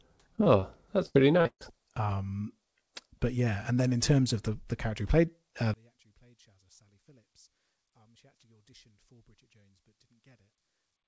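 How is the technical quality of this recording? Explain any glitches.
The recording has three kinds of transmission fault. It carries the band limit of a wideband call codec, with nothing above 8 kHz, which fits G.722.

Two short concealed packet losses occur close together, at 0.36 to 0.40 s and 0.44 to 0.48 s, each about 20 ms of missing audio. The receiver bridged each hole by extending the preceding sound, pitched or noise-like as appropriate, then crossfaded back into the real signal. The result is a quick smear or wobble, and a brief consonant-like sound may be lost.

From 1.06 to 1.68 s, repeated packet loss produces robotic sound. Four separate gaps fall in that stretch, the longest 136 ms, and concealment fills roughly 44 percent of the span. Because each patch is followed almost immediately by another dropout, the synthesised continuation keeps restarting. The audio turns choppy, with fragments missing rather than a single clean interruption.

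From 5.74 s to the end, right after "character who played uh", the level collapses by about 34 dB. This is most likely one channel inverted in polarity. When the two channels are summed to mono, their shared content cancels, so the centred speech nearly disappears. What remains is only the small difference between the channels, heard as a faint residue for the rest of the clip.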